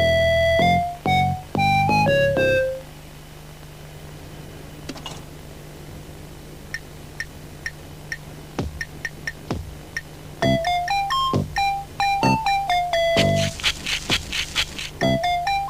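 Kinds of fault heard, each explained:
No faults can be heard.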